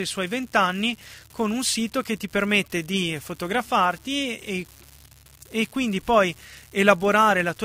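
Speech runs the whole clip with an unreliable data bit. A steady crackle persists, even in pauses. Random samples flip by a fixed step, about -27 dBFS.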